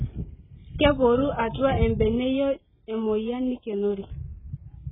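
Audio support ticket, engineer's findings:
AAC compression, throughout the speech. Nothing above about 3.7 kHz; sibilants dull, smeared, with a fizzy, warbling texture on sustained sounds. Likely cause: AAC-LC encoding at a very low bitrate, consistent with about 8 kbps. Encoder lowered bandwidth and quantised coarsely, leaving spectral holes and noisy substitute bands. Damage heavy.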